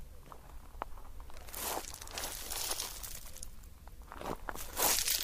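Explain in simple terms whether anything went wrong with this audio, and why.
Nothing went wrong here.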